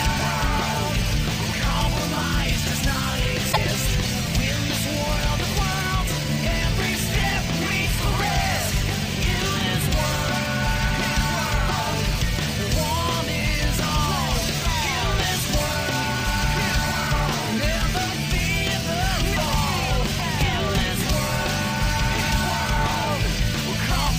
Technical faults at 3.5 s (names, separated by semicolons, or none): damaged data in a compressed stream